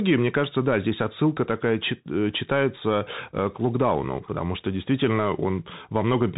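Bluetooth CVSD headset codec damage runs through the whole of this speech clip, from start to finish. The sound is cut off above 4 kHz, giving the boxed-in, telephone-like band of a headset link. CVSD encodes only whether each sample goes up or down, with an adapting step size, so loud high-frequency energy outruns the step and distorts. S sounds come out scratchy over a granular hiss, a character that fits a 64 kbps CVSD stream.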